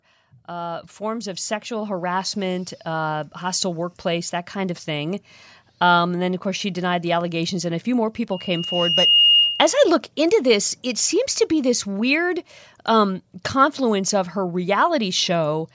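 From 0.46 to 5.32 s you can hear automatic gain rising: the gain control decided the input was too quiet and kept pushing it up, about 11 dB in all, so the speech and the room noise behind it swell together over those five seconds.

Then at 8.31 s a loudspeaker feedback squeal starts. The mic is picking up the speaker it feeds, and the loop runs away at 2.8 kHz. That tone builds over roughly a second until it sits a few dB above the speech, and it hangs on until 9.84 s.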